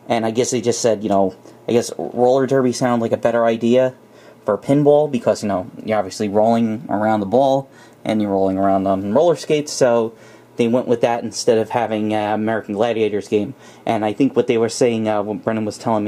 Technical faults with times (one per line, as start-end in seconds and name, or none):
none